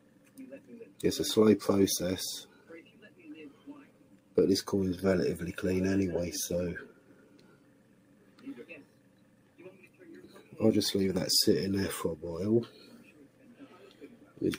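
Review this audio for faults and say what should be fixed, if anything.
A noise suppressor meant for speech has been left on, treating sustained parts of the sound as noise. Attacks pass while held tones and tails are pulled down, so the level swings by around 10 dB and pumps. Unlike compressor pumping, the dips follow steadiness rather than loudness.

Sound cut by the noise suppressor appears at 0.0–0.38 s, 2.48–3.22 s, 3.5–3.67 s, 3.83–4.36 s, 6.92–8.43 s, 8.83–9.59 s, 9.85–10.0 s and 12.98–14.41 s, each sinking by up to about 6 dB. Level sags and decays shorten rather than dropping out entirely, which separates this from dropouts.

Fix: bypass speech noise suppression for non-speech material, or switch the processing chain to a music mode.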